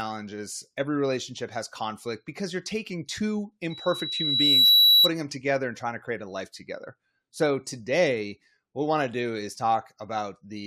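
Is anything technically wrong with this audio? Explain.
Yes. From 3.70 to 5.12 s there is loudspeaker feedback squeal. A 3.9 kHz tone swells over about a second to roughly 15 dB above the speech. The microphone is re-amplifying its own loudspeaker.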